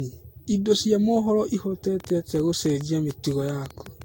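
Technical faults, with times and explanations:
Throughout: generation loss. The audio sounds swirly, smeared and hollow, with blurred attacks and nothing above 16.6 kHz. This is likely from being re-encoded around seven times with Vorbis near 64 kbit/s, each pass requantising on a shifted frame grid, so noise and spectral holes accumulate.
2.00 to 4.03 s: train of clicks. About fifteen similar clicks tick over the sound at an uneven pace averaging 6.95 per second, peaking roughly 10 dB above the signal. This is likely from interference or a faulty connection injecting repeated pulses.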